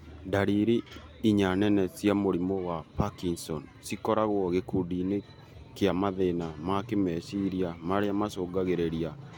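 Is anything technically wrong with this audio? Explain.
No technical faults are audible.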